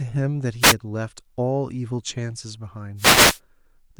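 At 0.60 to 0.75 s and again at 2.96 to 3.40 s, wireless microphone noise hits the speech. The FM radio link fades, so receiver static swishes over it.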